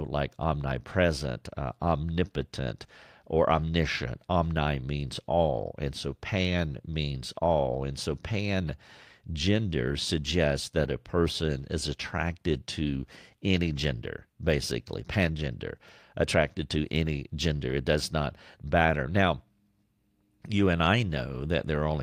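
No technical faults are audible.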